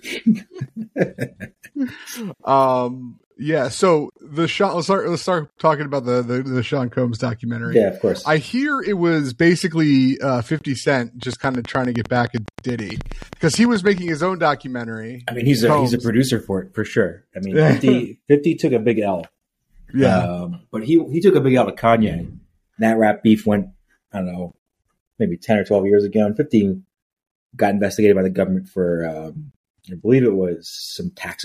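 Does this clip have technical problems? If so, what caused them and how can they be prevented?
Yes. From 11.23 to 14.09 s a train of clicks ticks at a regular 9.45 per second, roughly thirty pulses standing about 5 dB above the audio. The likely cause is interference from nearby equipment or a faulty connection or power supply injecting near-identical pulses. On a spectrogram they show as evenly spaced vertical lines, and on a waveform as sharp spikes. Prevention: move or shield nearby gear and check interface cabling and drivers.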